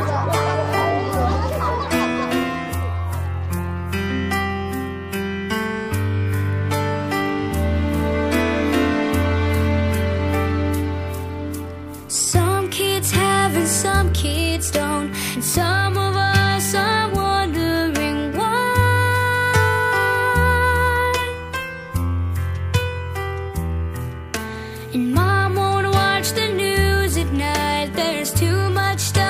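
No technical faults can be heard at any point in the audio.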